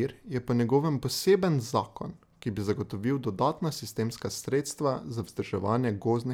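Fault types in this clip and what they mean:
No technical faults can be heard in this speech recording; the signal stays continuous and stable throughout, with no audible disturbance to the audio path.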